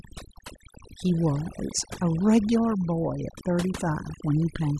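Overdone noise removal throughout: aggressive reduction cuts bands near the noise estimate, leaving near-silent gaps with twinkling specks.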